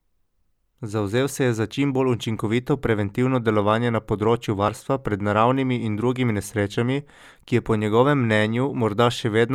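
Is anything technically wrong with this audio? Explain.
Yes. The speech has audio missing between chunks, twice: at 1.71 s, after "se je za" and before "čim bolj učinkovito preventivno", and at 4.68 s, after "preventivno delovanje na področju" and before "pred naravnimi in drugimi". The likely cause is a recorder handling audio in 3-second chunks and dropping roughly 30 ms at each handover, with the two sides butted together. Each one sounds like a brief skip in the flow, landing about three seconds apart.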